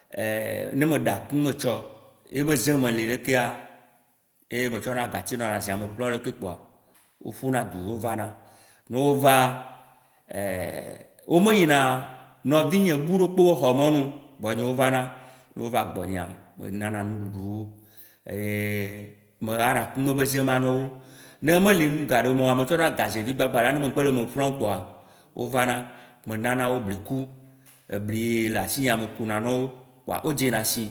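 No technical faults can be heard in this speech.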